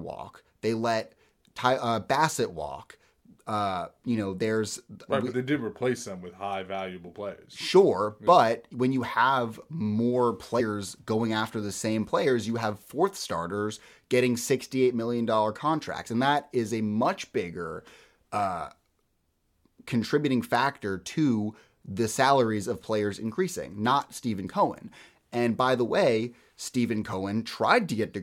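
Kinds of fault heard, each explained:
Compressed frames skipped: at 10.59 s and 27.12 s the speech jumps ahead, losing roughly a tenth of a second and then a brief instant, which points to several and then one 23.2 ms codec frame never being decoded.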